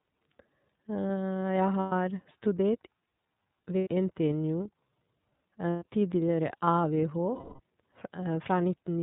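Throughout, the speech sounds band-limited and slightly rough and synthetic, with nothing above 4 kHz and plainly audible coding damage. That is the iLBC codec, a narrowband VoIP coder whose character here fits its 13.33 kbps mode with 30 ms frames.

At 1.81, 3.78, 5.70 and 7.35 s the speech gives way to a held, buzzy or breathy vowel lasting about 120, 90, 120 and 240 ms, the longest one fading. These are lost iLBC frames: the decoder repeated the last pitch cycle with noise, and the speech recovers almost immediately afterwards.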